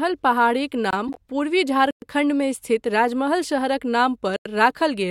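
At 0.91 s the speech drops out for about 23 ms, a block of digital silence that cuts out and back with no fade. Then from 1.07 to 1.17 s there's a corrupt frame decoded: a few damaged compressed frames played anyway, putting energy at the wrong frequencies, so it comes out as a brief chirp or burst of noise. Two more silence blocks follow, a 113 ms hole at 1.91 s and a 93 ms one at 4.36 s. That last one fits a 4096-sample buffer the program didn't fill in time.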